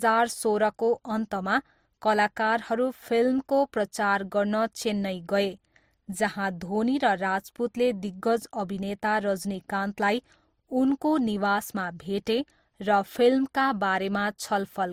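Throughout the speech, two overlapping sets of coding artefacts point to transcoding between lossy codecs, likely MP3 re-encoded as Opus, with nothing present above 20.1 kHz.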